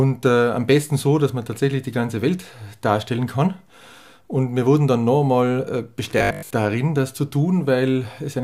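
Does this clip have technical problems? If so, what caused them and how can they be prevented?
Yes. From 6.19 to 6.51 s there's robotic sound from repeated short buffers: most of that stretch is a looped scrap of the previous audio, giving a rigid 50 Hz buzz, which fits a 20 ms buffer being replayed, likely because fresh audio arrived too late. Bigger playback buffers or a steadier feed would prevent it.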